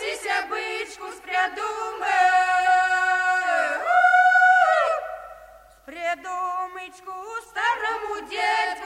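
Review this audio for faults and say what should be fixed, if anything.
There are no faults in this audio, so nothing needs to be fixed.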